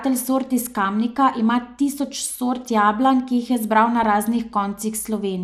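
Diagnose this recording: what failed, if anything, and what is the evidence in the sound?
The codec stage likely starved MP2 compression of bits, fitting around 80 kbps. Upper sub-bands drop out, leaving the speech dull and gurgling throughout.

In reception, DAB burbling: a few bit errors slipped past error correction into the audio data across three frames, producing brief blips of noise in the sub-bands from 4.03 to 4.06 s.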